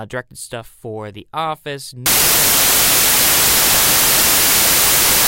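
Right up to 2.06 s things are intact, but from there to the end the samples are built from the wrong bytes. The reader has slipped out of step with the sample boundaries, whether through a one-byte offset, swapped byte order or a wrong alignment assumption. So the rapidly changing low-order bits end up acting as the most significant part of each value. What you get is a sudden wall of loud, harsh broadband noise for the rest of the clip.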